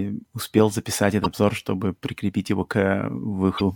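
At 1.22–1.26 s and 3.57–3.61 s, damaged data in the compressed stream makes the decoder misread frames and lose sync, producing brief chirps, squawks, clicks or short holes.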